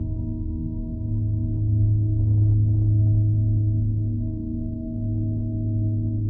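Everyday sounds, and nothing technically wrong can be heard.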